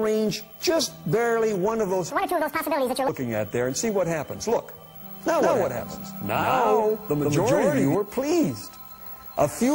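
From 2.10 to 3.08 s, a section is at the wrong speed. It runs 1.78 times too fast, so pitch and tempo jump together, about ten semitones higher and clearly hurried. The likely cause is the section being played against the wrong clock.

From 5.29 to 7.95 s, a doubled audio track appears. A second full-band copy trails the original by roughly 150 ms, at about the same level. It has no decay or room colour. It likely comes from a second, slower capture path, and it starts and stops abruptly.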